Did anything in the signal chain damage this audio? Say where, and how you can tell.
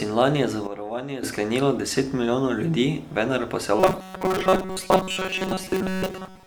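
Yes. A sudden gain jump runs from 0.67 s to 1.23 s, where the sound and its noise floor drop together by about 11 dB and then step back. The waveform envelope shows square edges. This likely comes from a digital gain change at the processing stage, applied without a ramp.

From 3.80 s to the end there is robotic sound from repeated short buffers: a rigid, metallic 188 Hz buzz that loosely follows the speech. The driver or buffer stage is likely starved and keeps replaying a slice of about 5.3 ms, which replaces most of the real audio. On a spectrogram this appears as evenly spaced horizontal harmonic lines at multiples of 188 Hz.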